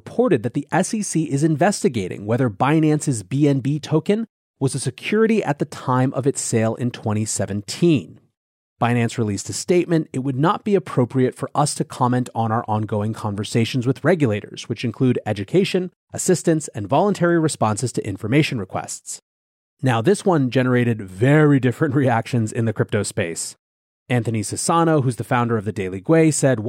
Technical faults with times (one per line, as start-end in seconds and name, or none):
none